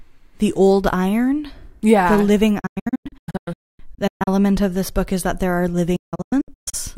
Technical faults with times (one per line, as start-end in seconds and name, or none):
2.60-4.28 digital broadcast dropout
5.96-6.74 digital broadcast dropout